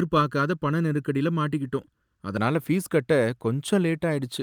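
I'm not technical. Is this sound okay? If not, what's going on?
No. From the start until about 2.37 s, one channel of this speech runs a fraction of a millisecond behind the other, and the two get mixed into one, causing channel delay (comb filtering). Certain pitches cancel out, from roughly 700 Hz upward, so the voice sounds hollow and phasey.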